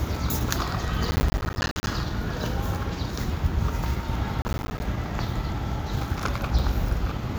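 From 1.11 to 1.87 s and again from 4.42 to 4.8 s, processor overload crackle tears through the sound. Dozens of missed deadlines each leave a hard-edged silent gap of roughly 10 ms. Unlike a single dropout, they pile into a gritty burst that stops abruptly.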